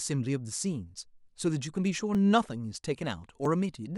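At 1.27, 2.15 and 3.45 s the speech jumps forward, losing only a few milliseconds each time, with no gap of silence. That's most likely a dropped buffer (overrun): samples weren't collected in time and got overwritten, so the two sides butt together.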